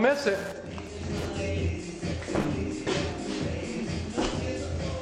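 Wi-Fi interference runs throughout the audio as a steady ticking about ten times a second, repeating every 102.4 ms, roughly 20 dB below the sound. A nearby Wi-Fi radio's beacon pulses are being picked up and rectified by the audio circuit, turning each transmission into an audible click.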